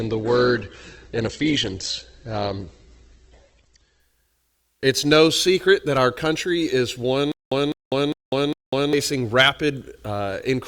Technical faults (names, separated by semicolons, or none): adaptive stream starting at a low bitrate; stutter with silent gaps